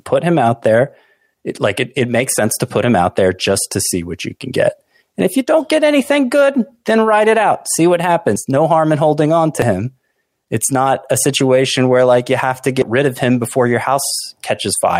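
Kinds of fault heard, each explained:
Dropped buffer (overrun): the speech jumps abruptly three times, at 8.36, 9.62 and 12.82 s, where the sound skips ahead with no gap. That points to a likely overrun, where the recording side didn't grab a block of samples before the hardware overwrote it, so the audio on either side gets spliced straight together. The first skip loses the most, something like 70 ms, the middle one only a sliver, and the last somewhere in between.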